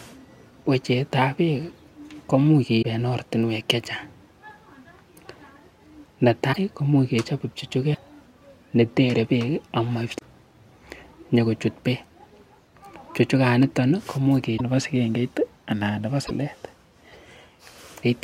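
Six short glitches break into the speech at 2.81 to 2.85 s, 6.52 to 6.56 s, 7.93 to 7.97 s, 10.18 to 10.22 s, 14.57 to 14.61 s and 16.26 to 16.31 s. Each lasts about 40 ms, and the speech resumes further ahead than expected. The likely cause is a broken MP3 bit reservoir. Frames of 26.1 ms were lost, and the frames that followed reached back for borrowed data that was no longer there. They decoded into under two frames of corrupted sound.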